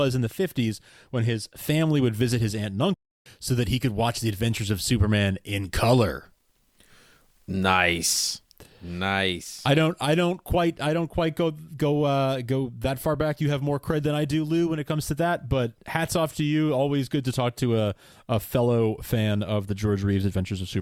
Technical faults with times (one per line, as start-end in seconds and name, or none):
2.94-3.26 playback stall